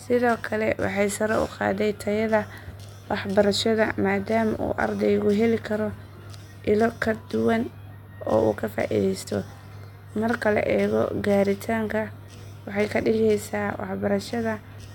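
No technical faults can be heard anywhere in the speech recording.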